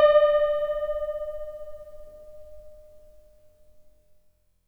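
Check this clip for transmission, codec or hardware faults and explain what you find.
No faults detected.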